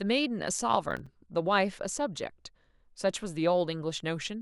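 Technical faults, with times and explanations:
0.91–1.14 s, processor overload crackle: the speech breaks into a short burst of gritty crackle as the processor misses a run of buffer deadlines, which fits about five missed buffers of around 5 ms. Each miss drops to silence with hard edges, producing the tearing clicks.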